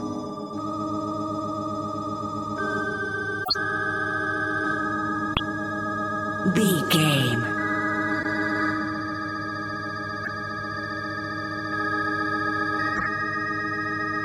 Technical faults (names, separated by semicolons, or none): corrupt frame decoded